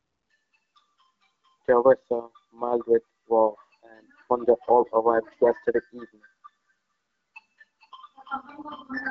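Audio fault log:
The speech carries the band-limited character of an AMR wideband (HD Voice) codec working as intended, with clear speech up to around 7 kHz that points to a rate of about 12.65 kbit/s, and no fault to log.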